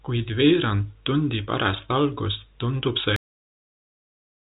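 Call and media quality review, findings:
Cut-off end at 3.16 s: final buffers never written or played out, so the speech stops mid-sound and drops straight to digital silence, no decay, for the remaining 1.3 s. G.711 A-law telephone band (nothing above 3.8 kHz) intact up to the cut.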